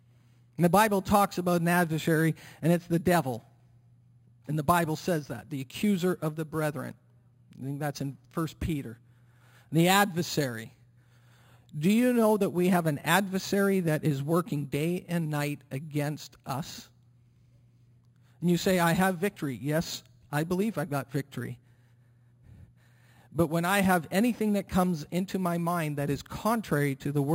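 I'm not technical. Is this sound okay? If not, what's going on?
No. Imaging from sample-and-hold upsampling runs through the whole speech clip, start to finish. The audio was stored at a low rate, about 11 kHz, then converted up to 48 kHz by simply repeating each sample with no smoothing. That leaves mirrored copies of the sound, the first between about 5.5 and 11 kHz, heard as a thin metallic fizz that rises and falls with the speech and drifts opposite to its pitch.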